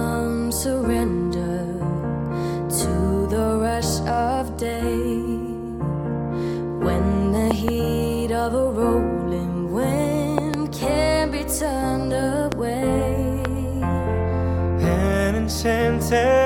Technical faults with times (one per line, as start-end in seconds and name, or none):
7.51-7.70 loud pop
10.38-10.56 loud pop
12.52-12.54 loud pop
13.45-13.47 loud pop